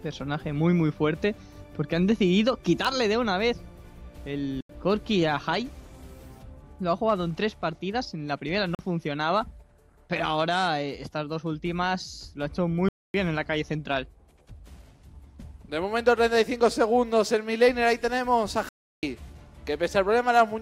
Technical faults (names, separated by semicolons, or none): block of digital silence